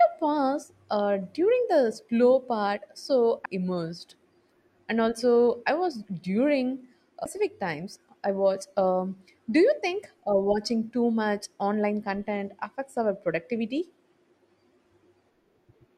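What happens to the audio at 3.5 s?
At 3.45 s a CD skip occurs: the laser jumps to another turn of the spiral, giving a brief mute of a few milliseconds, a tick, and a sudden jump in the speech.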